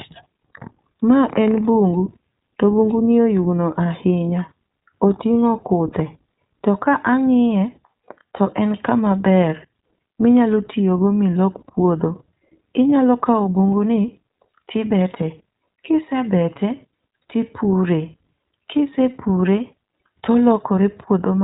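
From start to finish the speech carries plainly audible iLBC codec damage: nothing above 3.8 kHz, and a rough, slightly synthetic edge consistent with independently coded 20 ms frames.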